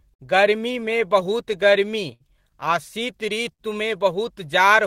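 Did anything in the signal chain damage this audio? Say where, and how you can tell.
Yes. Clock drift between sender and receiver: the sender's clock runs roughly five percent slow, so the receiver's jitter buffer keeps draining, and small timing hiccups recur throughout the speech.

Repeated timing corrections at the buffer stage from 0.04 to 1.86 s: the receiver repeats short pieces, playing at 98% speed and adding roughly 40 ms.

Short stalls from late packets on the network: the jitter buffer ran empty at 0.14 to 0.21 s, 2.13 to 2.22 s and 3.53 to 3.61 s, stretching the last sound by 55, 68 and 68 ms. Nothing is lost, but each held sound lingers too long.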